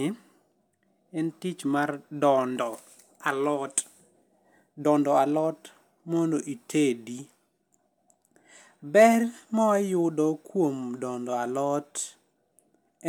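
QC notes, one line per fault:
Nothing to flag on this speech clip; it all sounds as it should.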